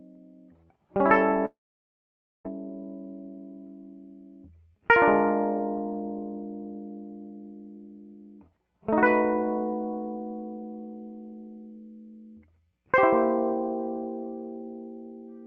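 Long network dropout, from 1.45 to 2.47 s: the music gives way to a short buzzy continuation of the last sound that fades, then 0.91 s of silence. Playback resumes with 1.0 s of material gone, likely because packets stopped arriving.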